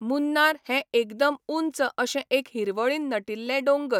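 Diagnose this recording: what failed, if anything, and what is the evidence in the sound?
Nothing failed in this recording.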